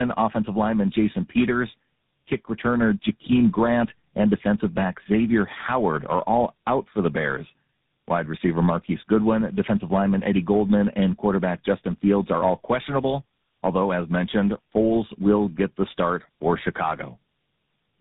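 Throughout, the speech shows tandem speech coding. The sound fits three speech codecs in a row, consistent with AMR-NB, CVSD and GSM full rate, each re-coding the previous one's already damaged output. Nothing reaches above 3.8 kHz, leaving it rough, muffled and warbly.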